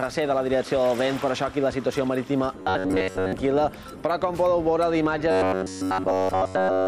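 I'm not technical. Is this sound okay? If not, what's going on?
No. The sound turns into a robotic buzz twice, from 2.58 to 3.33 s and from 5.31 s to the end at 6.88 s. This is robotic sound from repeated short buffers. The audio is likely arriving too slowly, so a tiny slice of about 11 ms gets replayed over and over. That gives a steady metallic hum at 93.8 Hz. Most of the first stretch is repeats, and the second is entirely repeats.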